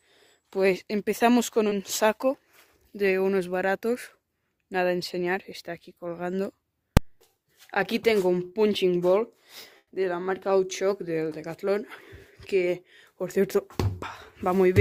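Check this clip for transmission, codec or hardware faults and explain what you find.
There are three kinds of fault: two short concealed packet losses, a full-scale block from invalid numbers, and one burst of packet loss.

Short concealed packet loss, at 1.69 to 1.73 s and again at 8.49 to 8.53 s: each is a brief smear or wobble in the sound. About 20 ms of audio failed to arrive in time, and the receiver covered the hole by extending the preceding sound before blending back into the real signal.

Invalid numbers at full scale, at 6.97 s: a single sharp bang. A calculation produced infinite or invalid values, and these were clamped to the maximum output level for a block of about 2.9 ms, which fits a 128-sample processing block.

Burst of packet loss, from 9.77 to 9.89 s: the sound hangs and fades, then drops to silence for about 30 ms before resuming further on. Roughly 100 ms of audio never arrived. 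The receiver stretched the last sound while turning it down, and that stretch of the original is simply missing.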